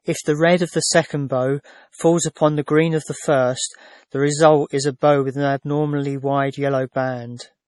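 Speech with a hard cut-off near 11.4 kHz throughout, likely low-bitrate audio saved at a high bitrate: MP3 artefacts from roughly 32 kbit/s encoding survive the later high-rate re-encode.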